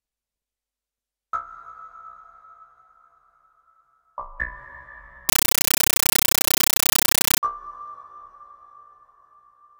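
From 5.29 to 7.43 s the sound turns to loud chattering static, a compressed stream played as audio: undecoded Dolby Digital bursts about 9.3 ms long repeating at 31.25 Hz.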